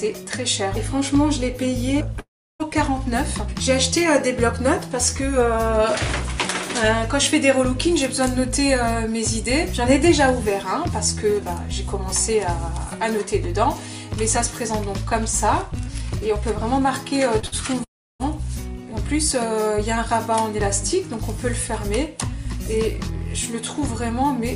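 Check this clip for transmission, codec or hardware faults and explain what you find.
The clip has three kinds of transmission fault, all clustered as network losses, with the worst stretch between 17.39 and 18.22 s.

Long network dropout, at 2.19 to 2.62 s and again at 17.84 to 18.22 s. The sound cuts away for roughly 0.4 s the first time and 0.36 s the second. After a brief continuation of the last sound, about 0.33 s and 0.32 s of each gap are plain silence. Playback then resumes further on, with that portion gone. This is likely a stall in packet delivery long enough that the receiver's concealment gave up.

Short concealed packet loss, at 17.39 to 17.45 s. About 40 ms of audio failed to reach the decoder in time. The receiver patched roughly 30 ms of it by extending the preceding sound before blending back into the real signal. It comes across as a quick smear or wobble rather than a clean gap.

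Burst of packet loss, at 17.46 to 17.55 s, immediately after the previous event. Around 40 ms in a row was lost. The receiver stretched the last sound over about 52 ms while turning it down, so it is heard as a brief held buzz or fading hiss before the audio picks up later, skipping what fell in between.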